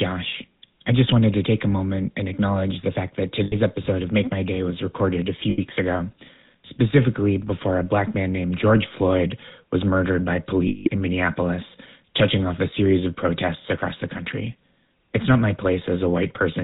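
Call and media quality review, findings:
GSM full-rate codec, whole clip. Vocal-tract model driven by regular pulse excitation, only every third excitation sample kept, nothing passed above 4 kHz. Result: plainly audible buzzy, gravelly roughness over all speech and a muffled top end, consistent with the 13 kbps full-rate coder.

Lost GSM frames, at 3.44 to 3.56 s, 5.50 to 5.59 s and 10.68 to 10.89 s. Receiver conceals bad frames by repeating the last good frame's parameters at falling level. The first two gaps are 80 ms each, which fits about four 20 ms frames, heard as short rough, metallic holds. The third is 180 ms, about nine frames, a longer metallic ring.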